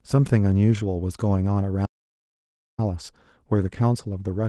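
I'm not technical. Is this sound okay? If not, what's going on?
No, there's an audio dropout to silence: the speech cuts to dead quiet from 1.86 to 2.79 s, likely a lost input, and that stretch is simply gone.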